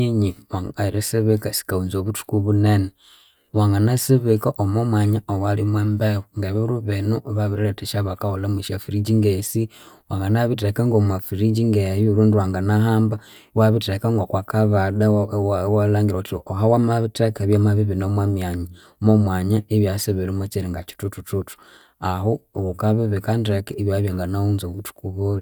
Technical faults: none

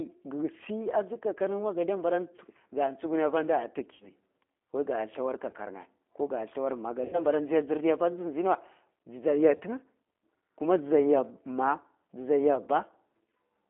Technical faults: G.729 codec; VoIP packet loss concealed by the speech codec

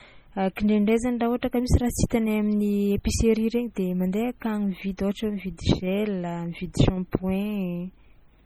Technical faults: MP3 compression

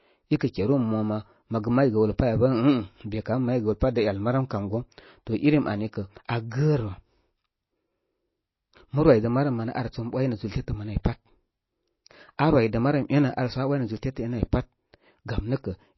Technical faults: MP3 compression

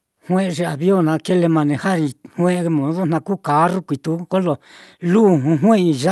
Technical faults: none

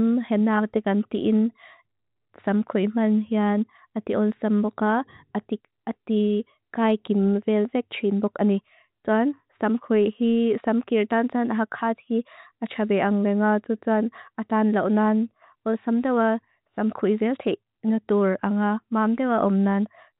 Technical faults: none

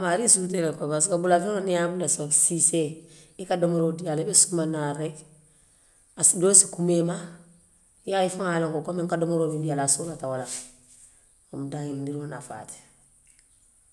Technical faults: none

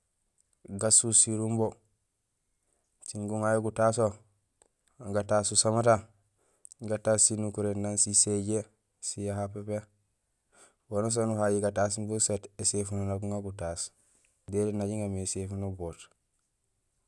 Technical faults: none

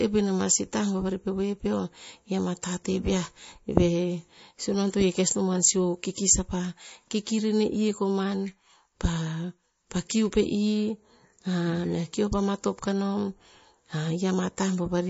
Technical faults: MP3 compression

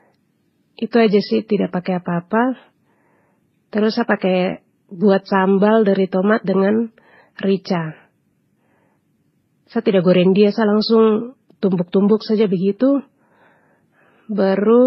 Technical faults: transcoding between lossy codecs

